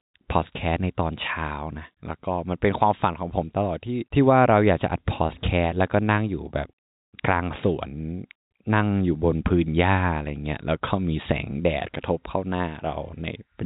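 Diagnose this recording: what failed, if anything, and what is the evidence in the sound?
Nothing failed; the telephone-band speech shows no defects.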